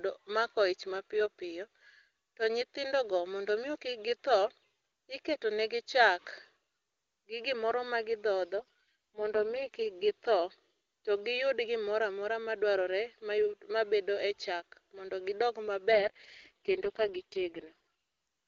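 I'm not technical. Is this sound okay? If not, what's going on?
No. From 8.56 to 9.76 s and again from 15.92 to 17.76 s, there is an AMR rate drop: the phone network briefly switches the speech codec to a lower setting, making the speech sound rougher and more synthetic until it switches back.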